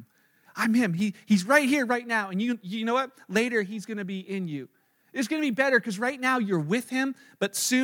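No technical faults can be heard in this recording.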